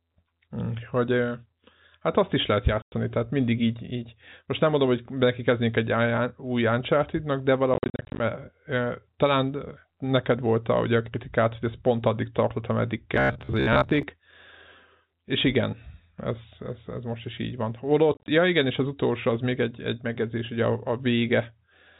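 Speech over a telephone-band line, with nothing above 4 kHz, is cut by sudden silent holes with hard edges: one solid gap at 2.82 to 2.92 s after "hát azt is lehet", broken gaps scattered across 7.74 to 8.2 s, and again at 18.14 to 18.28 s after "most is így van". This is packet loss filled with silence, with holes fitting 10 ms packets. From 13.15 to 14.03 s, after "pont addig tartott ameddig", the voice becomes a rigid metallic buzz at about 67 Hz. This is robotic sound, likely from repeated short buffers, with roughly half the audio replaced by 15 ms repeats.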